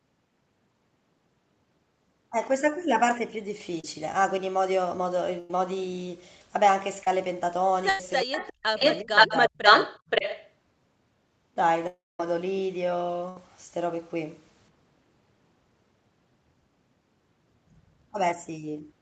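Short concealed packet loss at 3.80 s and 7.03 s: about 30 ms of audio missed the decoder each time, so the receiver extended the preceding sound, leaving a brief smear.

Burst of packet loss at 5.39 to 5.50 s, 7.89 to 8.00 s and 13.29 to 13.37 s: runs of 100, 100 and 70 ms were lost. The last sound is drawn out and fades, then the speech resumes with that stretch missing.

Speech suppressed in double talk at 8.24 to 8.74 s, 9.03 to 9.32 s and 9.49 to 9.63 s: the voice dips sharply, by up to about 40 dB. This is likely because the echo canceller turned everything down while both sides overlapped.

Echo leak at 8.32 to 8.53 s and 8.77 to 10.52 s: a delayed copy of the voice returns. It first arrives 366 ms late at about 10 dB below the speech, then 526 ms late at about 5 dB above it. The likely cause is loudspeaker pickup that the far side's canceller left in.

Long network dropout at 11.87 to 12.20 s: about a third of a second is gone. 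The concealment fades into roughly 210 ms of silence, likely because no audio arrived in that stretch.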